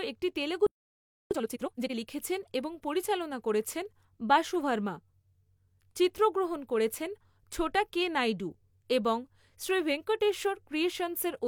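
At 0.67 s, just after "একটি তেলুগু", the speech cuts out abruptly. This is a playback stall. Silence holds until 1.31 s, a gap of about 0.64 s. The break lands mid-flow, not at a natural pause. The likely cause is that the player ran out of buffered data or its audio thread was blocked. Output simply stopped until it recovered.

From 1.31 s to 1.95 s comes time-compressed catch-up. The player trims its backlog by dropping small slices and cross-fading the joins. The speech runs at twice normal speed. Pitch stays normal, so it sounds rushed rather than squeaky. Normal pace returns at 1.95 s, just before "লিখেছেন এবং পরিচালনা করেছেন".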